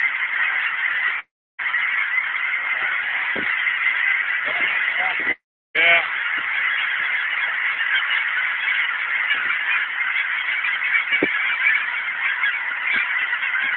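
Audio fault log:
1.19–1.60 s and 5.31–5.76 s, long network dropout: A likely stall in the incoming stream left the receiver without audio for about 0.4 s and then about 0.44 s. It covered each gap by stretching the last sound into a brief fading buzz, which dies away and leaves roughly a third of a second of silence. The audio then resumes further along, and the lost stretch never plays.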